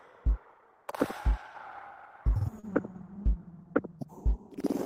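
At 2.59 to 2.66 s, short concealed packet loss: 40 ms never arrived, so the preceding sound was stretched across it, a brief smear rather than a silent gap.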